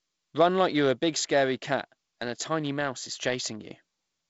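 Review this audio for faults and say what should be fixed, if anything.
No faults turn up in this audio, so nothing needs to be fixed.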